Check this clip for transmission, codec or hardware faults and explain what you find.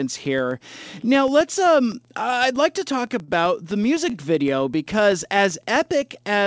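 Two faults stand out in this speech clip: a steady block-rate tick from the start to the end, and one brief stall.

The filter is restarted on every block, throughout the clip. Each block begins from an empty filter state, so a small transient forms at every boundary. These repeat at 7.81 Hz, which fits a 2048-sample block at 16 kHz. They are heard as a low, regular ticking or buzz that grows louder with the speech and fades as it quietens.

A short stall from a late packet occurs at 4.10 to 4.16 s. A packet arrived late and the jitter buffer ran dry, so the receiver held the last stretch of sound for 42 ms until it came. Nothing is lost, but that instant of speech lingers a little too long with a slight buzz or dip, and everything after is delayed by 42 ms. The G.722 call path carries no content above 8 kHz.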